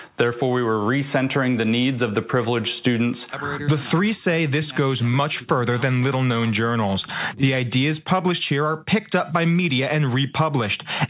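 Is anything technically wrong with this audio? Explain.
No, nothing is technically wrong with this audio.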